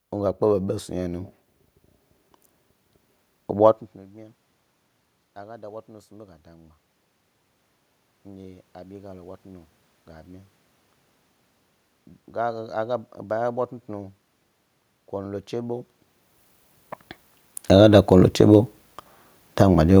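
A speech recording in which the voice and the room noise behind it swell together twice, by about 4 dB from 8.1 to 10.5 s and by about 5 dB from 12.3 to 15.9 s. This is automatic gain rising: the gain control judged the input too quiet and slowly turned it up, lifting everything at once. The level shifts near 3.5 s and 16 s are the talker moving relative to the microphone.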